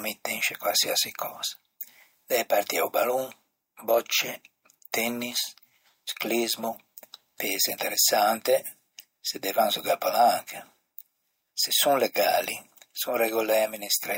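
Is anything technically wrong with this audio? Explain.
No, nothing technically wrong turns up anywhere in this speech recording, so there's nothing here to flag.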